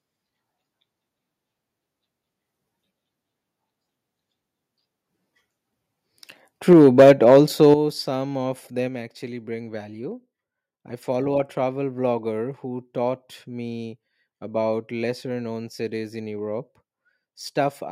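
From 6.7 to 7.74 s the speech likely drove the converter past its limit by about 5 dB, a microphone overload that flattens the peaks of roughly one sample in twenty and gives the loudest syllables a harsh, crackling edge. Within that overload, at 6.73 s, the microphone volume is stepped down by about 4 dB, likely the call software reacting to the clipping. It steps down again by about 9 dB at 7.74 s, just before "some of", so the voice and background noise drop abruptly together in two stages. At 8.88 s, after "some of", a sudden gain jump, likely a digital gain setting applied without a ramp, cuts the level by a further 4 dB through to the end.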